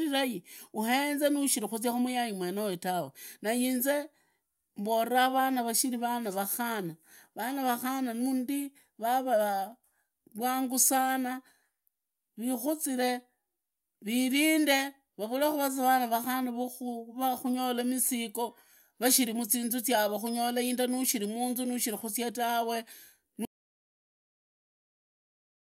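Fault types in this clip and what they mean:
Audio dropout to silence: at 23.45 s the speech cuts off mid-flow, and the remaining 2.3 s to the end are silence with no room tone underneath. The input was lost, likely through a disconnected device, failed link or accidental mute, while recording carried on writing silence. On a waveform the trace collapses abruptly to a flat line; a spectrogram shows a hard vertical edge followed by uniform black.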